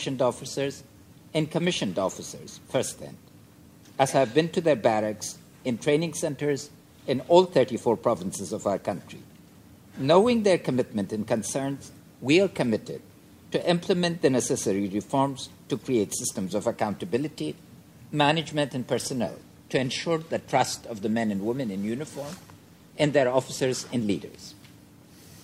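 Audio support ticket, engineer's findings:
Adaptive stream at a lower bitrate from 19.25 s to end. Sudden, gapless drop: treble thins and turns synthetic, artefacts rise. Likely bandwidth dip; sound fits a switch from AAC-LC near 96 kbit/s to HE-AAC near 32 kbit/s.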